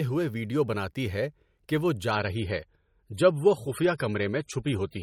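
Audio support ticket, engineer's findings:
Quality drop at 2.11 s, lasting to the end of the clip. Adaptive stream switched to a lower bitrate, with no gap. Treble thins, nothing above 18.4 kHz, with more codec artefacts. Sounds like MP3 stepping from 128 to 32 kbit/s.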